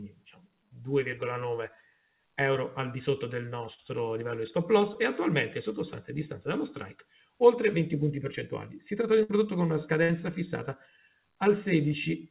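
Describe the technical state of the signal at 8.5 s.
At 8.5 s the audio is intact, with no dropout, glitch or distortion, only the narrow band of the WebRTC call path, which has nothing above 4 kHz and fits G.711 A-law coding.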